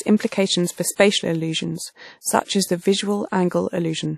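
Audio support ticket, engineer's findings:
Speech, entire clip: ringing, washy texture, hiss swelling and receding with level; codec damage plainly audible. Nothing above 16.3 kHz. Likely WMA compression: long transform blocks smear quantisation noise over tens of milliseconds. Damage fits a bitrate near 48 kbps.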